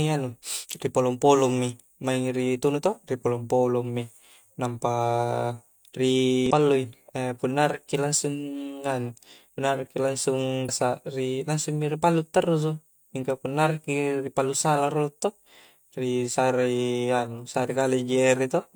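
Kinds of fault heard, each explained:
Damaged data in a compressed stream: corrupted bytes make the decoder misread frames and lose sync, giving brief glitches in the speech at 6.46–6.51 s and 10.65–10.70 s. Spectrograms show short disruptions; the waveform shows breaks in the envelope.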